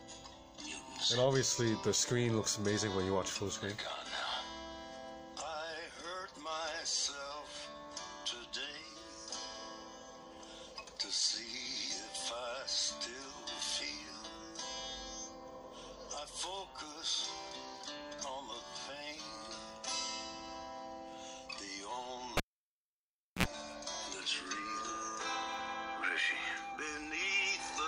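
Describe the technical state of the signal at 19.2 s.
At 19.2 s the signal is intact, with no audible dropout, distortion, clipping or other fault at that moment.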